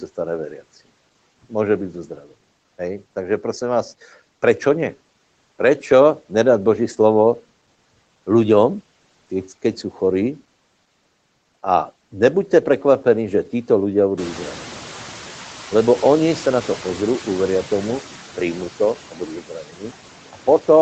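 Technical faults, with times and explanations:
Throughout: noise suppressor artifacts. The background is pulled down by about 12 dB between phrases and swells back under them, showing on a spectrogram as noise that pumps frame by frame.
18.95–19.21 s and 19.41–19.91 s: speech cut by the noise suppressor. Just after "tomu príjmu", parts of the speech dip by about 8 dB and then about 11 dB. The waveform shows brief notches and the spectrogram shows faded, swallowed fragments.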